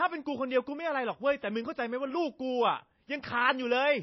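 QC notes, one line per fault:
Throughout, MP3 compression: nothing reaches above 5.8 kHz, so the speech sounds dull, with a plainly audible watery swirl as faint detail flickers in and out. Likely a starved encoder cutting treble and dropping weak frequency lines, which fits roughly 24 kbps.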